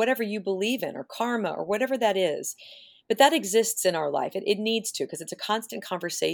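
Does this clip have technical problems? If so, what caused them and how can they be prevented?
No, no technical faults heard.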